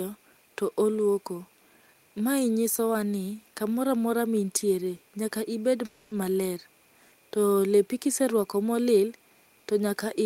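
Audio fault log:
5.85–6.13 s, call audio freeze. The speech stalls and the last sound is held as a fading buzz for about 260 ms, without dropping to silence. Speech then resumes where it stopped, with nothing lost but 260 ms added delay. Likely the jitter buffer ran empty while packets were held up.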